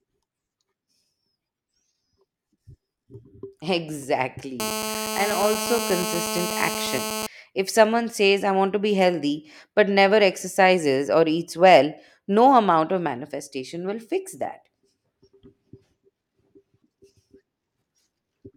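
From 4.60 s to 7.27 s, a GSM phone buzz appears. A nearby 2G phone in a call sends bursts 217 times a second. The audio circuit rectifies them. It is a steady, raspy 217 Hz buzz with many harmonics, about 7 dB below the speech.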